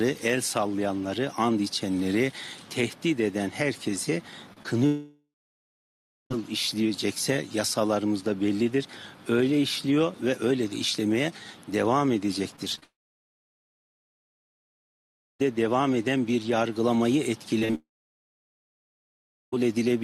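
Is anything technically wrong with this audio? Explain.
Yes, the audio suffers from several network-related faults.

Short concealed packet loss occurs at 4.53 to 4.61 s and again at 4.63 to 4.66 s. About 20 ms of audio each time failed to arrive, and the receiver patched the holes by extending the preceding sound, leaving a quick smear or wobble before the real signal resumes.

A long network dropout is the likely cause of three extended gaps: 4.86 to 6.32 s, 12.84 to 15.41 s, and 17.75 to 19.54 s. Each begins with a brief fading buzz or hiss as the last sound is stretched out, then falls to near silence for roughly one to two and a half seconds before audio returns with that portion gone.

Repeated packet loss, producing a robotic sound, appears at 12.56 to 12.84 s and 17.59 to 17.75 s, with three gaps in each stretch, each patched in quick succession. The sound turns choppy, and in the second burst roughly half the span is concealment. 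Each burst leads straight into a dropout.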